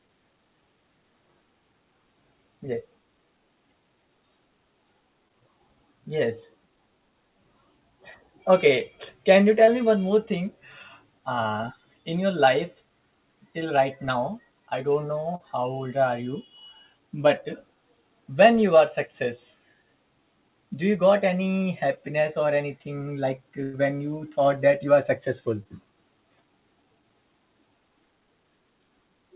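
Short concealed packet loss occurs at 5.28 s, at 9.65 s after "can you", at 15.35 s after "now i don't", and at 25.63 s after "that you are successful". Each time, 20 to 40 ms of audio arrived too late. The receiver extended the preceding sound and blended back, leaving a brief smear or wobble. A burst of packet loss at 23.63 to 23.75 s drops about 100 ms. The last sound is stretched across the gap and fades as it goes, becoming a held buzz or a dying hiss. The audio resumes further on with that stretch missing. All of this sits on a band-limited call path with nothing above 4 kHz, consistent with G.711.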